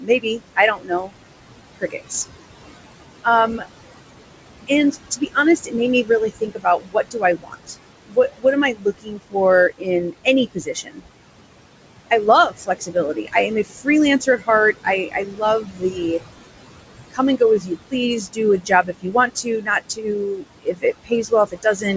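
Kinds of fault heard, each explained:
Noise suppressor artifacts: The suppressor pulls down bands it judges to be steady noise, frame by frame, by about 21 dB here, so the room noise sinks between phrases and returns under the speech, an effect that runs through the whole clip.
Speech cut by the noise suppressor: The suppressor misreads parts of the speech as noise and turns them down with the background, by about 11 to 22 dB. Affected parts sound swallowed or faint in six stretches from the opening to the end.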